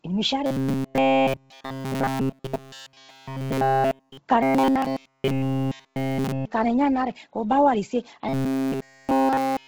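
Robotic sound from repeated short buffers affects this speech clip from 0.46 to 4.17 s (just after "igimi ishi"), from 4.43 to 6.46 s (ending just before "ikana eyano ari ke"), and from 8.29 s to the end. In each stretch the voice becomes a rigid, metallic buzz at 134 Hz that only loosely follows the syllables. Nearly all of the sound in those spans is made of repeats, most likely caused by short buffers being replayed while fresh audio arrived too late. That 134 Hz buzz fits a buffer of about 7.5 ms being looped over and over, imposing its own pitch.

Bluetooth LC3 compression runs through the whole recording. The upper band has a heavy, grainy, breathy texture where the codec has discarded detail and filled it with noise. This sound points to LC3 at a low bitrate of around 16 kbps with 10 ms frames, starving the high frequencies.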